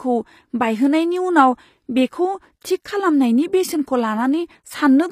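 From start to finish the speech carries plainly audible damage that points to HE-AAC compression, likely at a low rate consistent with about 24 kbps. The treble is not the original: it is rebuilt by copying lower bands upward, so s sounds come out gritty and metallic, with harmonics that don't line up above the crossover. On a spectrogram the upper band looks smeared and blocky, repeating patterns from below, and stops dead at 15.5 kHz.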